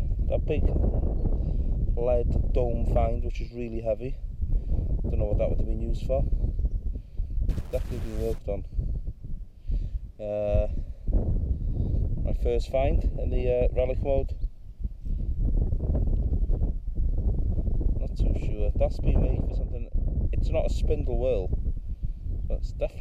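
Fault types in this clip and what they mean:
Stuck bit: from 7.49 to 8.38 s the audio takes on a grainy noise that rides along with the waveform. The likely cause is one data bit held at a fixed value by a broken line or converter, so about half of the samples are pushed off by that bit's weight. The error step is small, around -45 dBFS, which places it at a low-order bit and gives grain rather than buzz.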